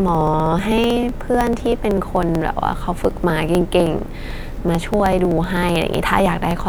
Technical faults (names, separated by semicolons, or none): periodic USB or driver dropouts